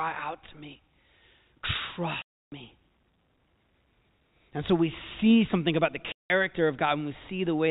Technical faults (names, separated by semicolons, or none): packet loss filled with silence